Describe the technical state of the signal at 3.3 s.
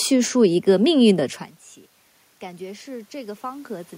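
At 3.3 s the signal is inside an automatic gain rising episode, from 2.39 to 3.95 s. After the input fell by about 21 dB, the gain control is slowly adding about 5 dB, so the room noise swells along with the voice, unlike a talker moving closer.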